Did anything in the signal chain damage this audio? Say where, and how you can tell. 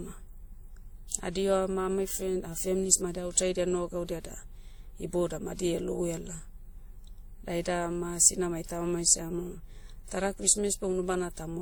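Yes, at the codec stage, throughout the speech. Two distinct sets of coding artefacts are audible at once, with nothing above 20.1 kHz, which fits likely transcoding between lossy codecs: a 64 kbit/s WMA encode re-encoded to Opus at 48 kbit/s, the second coder spending bits on the first one's damage.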